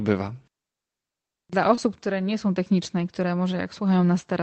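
At 1.75 to 1.79 s, short concealed packet loss: about 20 ms of the call arrived too late, so the receiver synthesized roughly 17 ms by extending the preceding sound, heard as a brief smear. On a spectrogram the harmonics or noise are briefly repeated, with the content above 8 kHz absent throughout as the call codec passes nothing higher.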